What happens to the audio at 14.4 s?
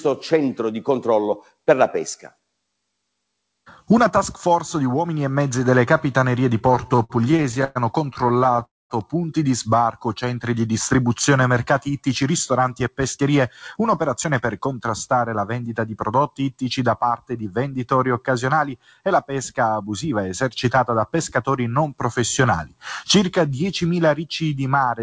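At 14.4 s the sound is inside a jitter buffer speed-up running from 12.22 to 15.09 s. The receiver trims tiny pitch-period slices to drain excess delay, playing about 5% fast at unchanged pitch and dropping around 150 ms overall. On a waveform, periods join seamlessly but events arrive early. A spectrogram shows harmonics at steady height, slightly compressed in time.

A noise suppressor applied to music or sounds is also active here, as throughout. Built for speech, it treats held tones and tails as noise, pulling them down by roughly 5 dB while attacks pass. It sounds like pumping and thinning. A spectrogram shows sustained bands fading quickly after each onset, below the 8 kHz ceiling from the G.722 call codec.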